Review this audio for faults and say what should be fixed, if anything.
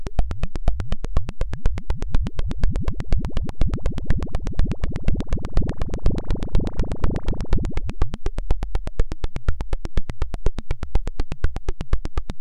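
No faults found on review, so nothing needs fixing.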